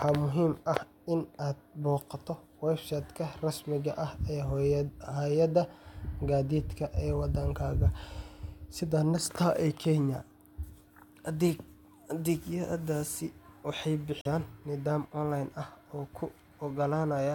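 At 14.21 s the wireless link most likely hit a Bluetooth stall: interference delayed the audio packets, the headphones' buffer ran empty, and playback halted until the retransmitted data came through. In the speech this shows up as an abrupt dropout, with about 39 ms of dead silence inside a disturbance that runs to 14.27 s. The sound then picks up again.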